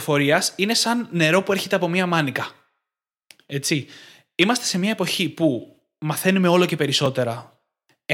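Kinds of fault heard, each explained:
Block of digital silence: two sharp ticks, at 1.11 s after "είναι σαν" and at 7.06 s after "που μαθαίνουμε όλο και". At each, the speech drops out for 1.45 ms and returns with no fade. The gap's length fits an unfilled 64-sample output block.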